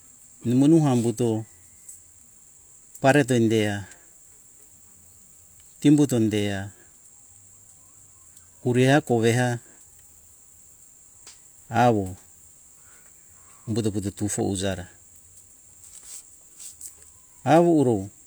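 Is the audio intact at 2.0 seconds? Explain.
Yes, the speech is intact at 2.0 seconds, with no fault at that moment.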